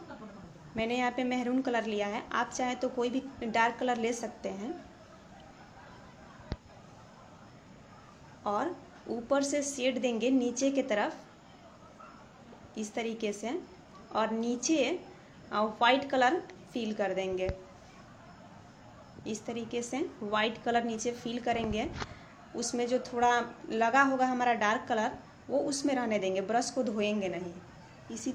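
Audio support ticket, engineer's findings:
No faults found in playback.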